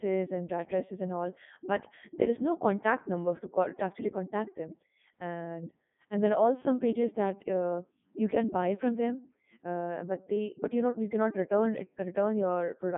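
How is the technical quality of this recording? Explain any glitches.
Technical quality is poor from start to finish. The whole clip has been passed through a Codec 2 vocoder, which keeps only pitch, voicing, energy and a rough spectral envelope, then rebuilds the speech from sine waves. The result is robotic and buzzy, with heavy damage consistent with the 3.2 kbit/s mode. On a spectrogram there is nothing above 3.8 kHz and the harmonics appear as unnaturally regular stripes. On the waveform, the original shape is gone and a synthetic one stands in its place.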